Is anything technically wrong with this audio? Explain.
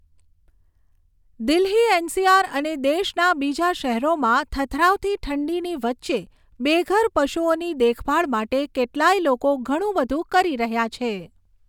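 No, nothing technically wrong is audible anywhere in this recording.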